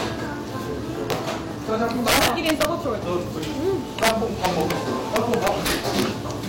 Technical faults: integer overflow

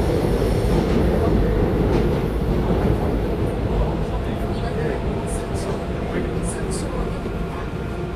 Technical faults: Vorbis compression

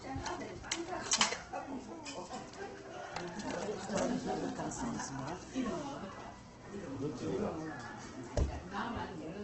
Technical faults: Opus compression

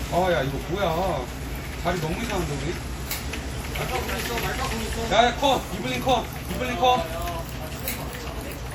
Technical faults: WMA compression

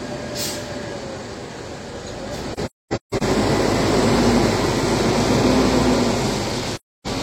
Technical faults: AAC frame loss with muting

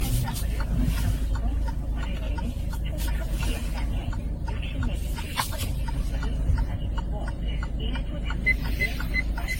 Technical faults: generation loss

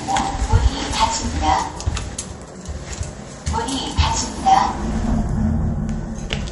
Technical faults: MP3 compression

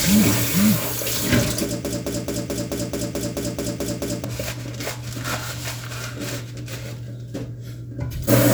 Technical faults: broken-record loop

